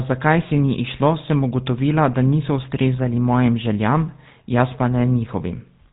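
GSM full-rate codec damage runs throughout this speech clip and is plainly audible. The sound is band-limited with nothing above 4 kHz, and it carries a buzzy, gravelly roughness, which fits the 13 kbps first-generation GSM coder. That codec rebuilds speech from a vocal-tract filter excited by evenly spaced pulses, retaining only every third excitation sample, so the fine detail of the original waveform is lost and replaced by coarse, pulse-driven texture.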